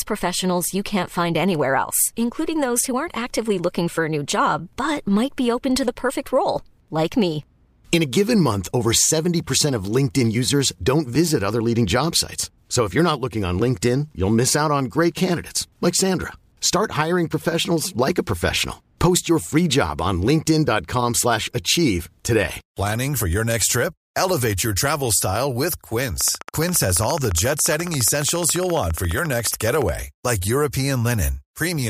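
From 26.21 to 29.90 s, right after "your travel style with", a train of clicks ticks steadily at 14.4 per second. The clicks sit a few decibels above the speech, likely from electrical interference or a faulty connection.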